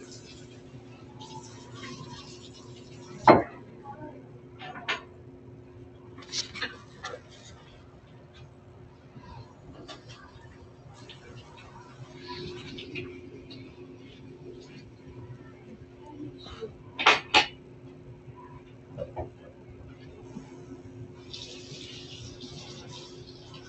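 From start to finish, a noise suppressor meant for speech acts on this sound, treating sustained tones and decaying tails as noise. Attacks come through while held material sinks by around 5 dB, so the audio pumps and thins. A waveform shows an envelope dipping after each onset; a spectrogram shows sustained partials fading in patches, all within a band that stops near 8 kHz, as the Opus call path would produce.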